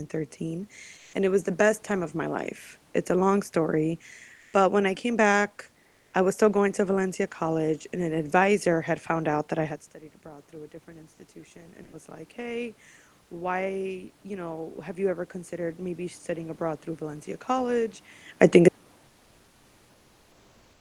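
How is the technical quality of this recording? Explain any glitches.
The recording passed through a call codec that adds its usual coding noise and whose high end stops near 12 kHz. Three kinds of glitch stand out.

Comfort noise in place of the background appears at 0.97–1.13 s, 4.35–4.53 s and 5.87–6.13 s. In each gap the real room noise gives way to smoother synthetic noise. The level shifts by about +1, +4 and −5 dB. The likely cause is discontinuous transmission filling pauses at the receiver.

Automatic gain rising runs from 9.56 to 18.03 s. The talker moves away around 9.5 s and the input falls by about 19 dB. The gain control then lifts voice and background together by about 13 dB over several seconds, recovering only part of the loss.

Sound dropped by the voice detector occurs at 11.83–11.93 s. There, 100 ms of sound is replaced by comfort noise, likely because the detector judged it to be background and stopped sending until it triggered again.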